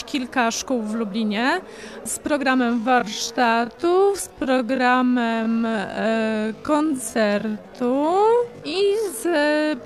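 At 2.72 s the pace suddenly drops to about 0.54 times normal speed and stays there to the end, with pitch unchanged. That's a time-stretched section, likely software padding the audio by repeating short slices, which is why it drags.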